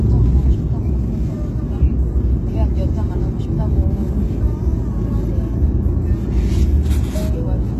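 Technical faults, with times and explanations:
Throughout, HE-AAC compression: the audio is band-limited, with nothing above about 12.3 kHz, and the top octave sounds synthetic rather than recorded, with a gritty, metallic sheen on bright transients. This points to a low-rate parametric codec, likely HE-AAC at around 16 kbps. Only the lower spectrum is properly coded. The treble is regenerated by copying lower bands upward and scaling them to a coarse envelope, so its harmonics no longer align with the content below the crossover.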